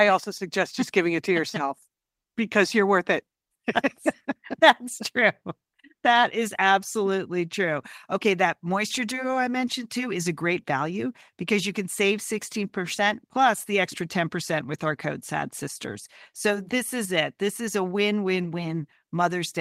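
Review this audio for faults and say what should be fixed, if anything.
A single lost packet was rebuilt from error correction at 18.43 to 18.45 s, the next packet's low-bitrate copy filling 20 ms, so the speech briefly turns rougher and noisier without a gap. Reducing packet loss on the network path, for example with a more stable connection or jitter buffering, would prevent it.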